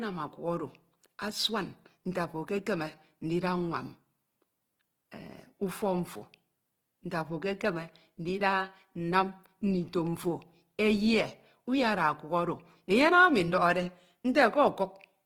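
Throughout the speech, the sound is grainy and rough. Tones turn noisy rather than swirling, as starved bands get filled with folded or noise content. This is likely Opus compression in music mode, fitting roughly 16 kbps. Bandwidth stays full, to 20.2 kHz.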